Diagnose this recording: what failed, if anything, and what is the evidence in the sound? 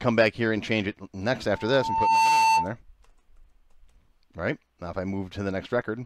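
Loudspeaker feedback squeal in the speaker-to-microphone acoustic loop: from 1.53 to 2.75 s a lone 893 Hz tone swells within a second, unlike steady interference tones.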